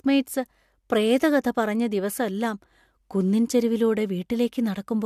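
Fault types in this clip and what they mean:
Nothing here to flag: the speech comes across without any technical problems worth listing.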